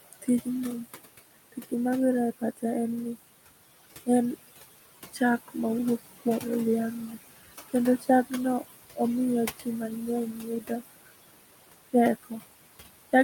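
Throughout this speech recording the background noise falls away in the gaps and creeps back up under the talking. These are noise suppressor artifacts: the suppressor pulls down each band it judges to be steady noise, frame by frame, by about 18 dB here, so the room noise, which sits only about 13 dB below the speech, gets pumped in and out. The same process also eats into the speech itself. At 0.13–0.47 s, 1.52–1.73 s, 2.39–2.64 s, 7.98–8.09 s and 9.56–9.67 s, around a tenth of a second of soft sound in each span comes out swallowed, dipping by about 13 to 19 dB at its deepest. At 10.33–10.82 s a longer stretch of roughly a third of a second fades. This is speech cut by the noise suppressor: quiet consonants and word tails fall close to the noise level, so the suppressor misreads them as background and turns them down along with it.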